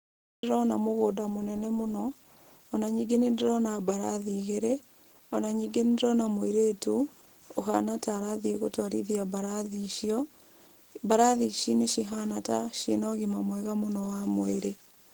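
The clip opens with a cut-off start. It is digital silence until 0.43 s, and then the audio begins abruptly in the middle of a sound, just before "mũgũnda mũnene mũno". There is no natural attack or fade-in, because capture began after the sound was already under way.

Throughout the speech, plainly audible coding damage makes the sound hoarse, grainy and muffled, even though the full bandwidth is kept. This is likely Opus compression in its hybrid speech mode, which fits a low bitrate of about 16 kbps.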